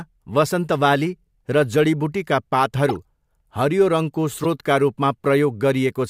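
Just after "वसन्त बाली र जडीबुटीका", 2.89–2.96 s, and at 4.44–4.46 s, a corrupt frame decoded plays damaged compressed data as loud chirpy blips, seen as brief misplaced spectrogram smears.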